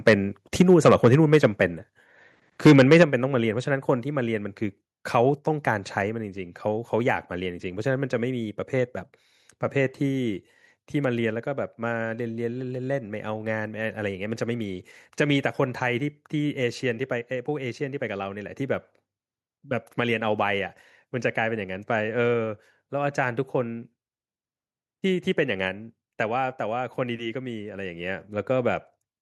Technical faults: microphone overload; microphone volume stepped down

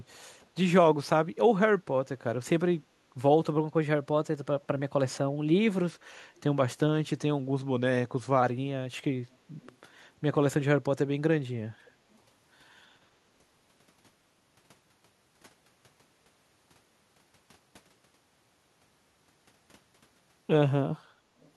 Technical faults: echo leak

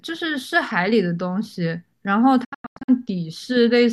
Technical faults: digital broadcast dropout

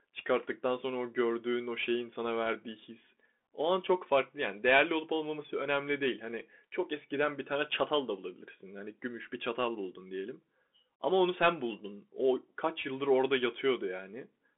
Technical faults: Bluetooth CVSD headset codec

